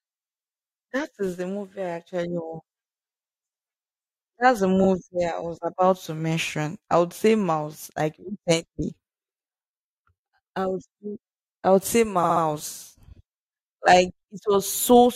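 At 4.83 s, before "I was about to", and 12.23 to 12.42 s, after "say I would say", repeated frames replay a 43 ms block once, then a 64 ms block three times. The result is a stutter that lengthens the audio rather than dropping any of it, as a dropout would.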